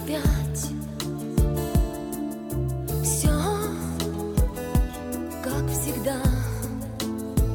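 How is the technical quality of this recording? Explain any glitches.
No glitches or technical faults can be heard here.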